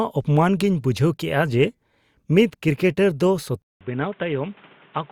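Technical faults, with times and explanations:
3.62 to 5.11 s, input switched to a poorer device: after a 0.19 s flat gap in the waveform, the speech returns dull, boxy and about 5 dB smaller, over fresh hiss about 30 dB down. The spectrogram goes blank above 3.8 kHz, likely from a narrower-band microphone taking over.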